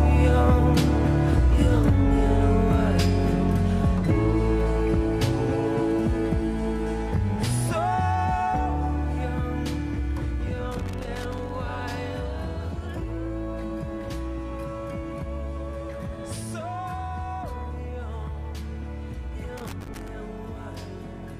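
Loose connector crackle appears from 10.71 to 11.55 s and again from 19.57 to 20.08 s: a worn or dirty contact rapidly making and breaking chops the signal, and any DC on the line adds pops, giving irregular bursts of scratchy crackle.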